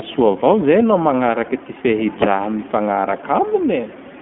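Throughout, the speech has gone through the iLBC codec, coding each short frame independently, consistent with 20 ms frames near 15 kbps. Nothing passes above 3.6 kHz, the band sitting around 200 Hz to 3.4 kHz, so the speech sounds thin, slightly rough and plainly synthetic.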